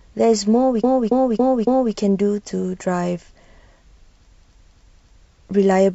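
A speech clip that stutters twice, looping the same short stretch of sound back to back: from 0.79 to 1.91 s a block of about 0.28 s plays four extra times, and from 4.37 to 5.21 s the same length of block plays three extra times. This is repeated frames, where a run of compressed frames was sent or written more than once. Here the block length fits six frames, and the repeats stretch the audio by 1.11 s and 0.84 s.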